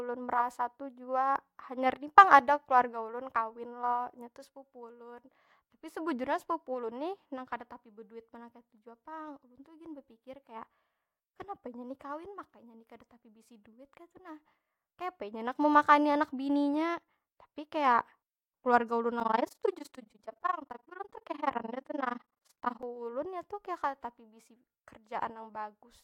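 A speech clip with an overlap-add ripple from 19.2 to 22.84 s. In that span the level pulses up and down at around 20 Hz, with a swing of about 60 dB. It sounds like a harsh tremolo chopping through the speech. The audio was split into windowed frames and rebuilt with an overlap that does not add up to a steady gain. So the loudness dips once per frame, which points to frames roughly 50 ms apart.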